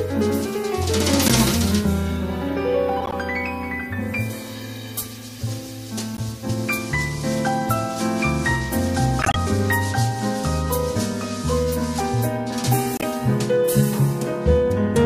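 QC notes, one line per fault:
1.26–1.34 s, 3.00–3.13 s, 6.14–6.21 s, 9.22–9.36 s, 12.93–13.04 s: corrupt frame decoded. Brief chirping bursts, loudest at about -5 dBFS, faintest at 6.14 s. The damaged frames were decoded anyway, so energy landed at the wrong frequencies.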